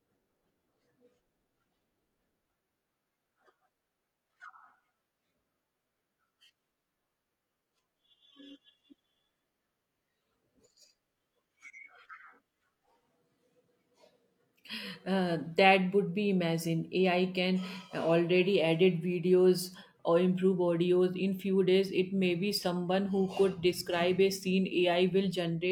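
Nothing stood out on listening to the speech here.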